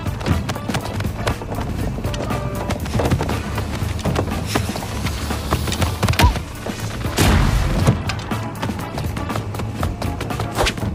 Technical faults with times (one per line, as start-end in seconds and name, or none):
none